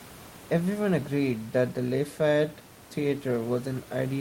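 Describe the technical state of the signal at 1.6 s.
At 1.6 s the signal is intact, with only the room's own background noise sitting about 24 dB below the speech.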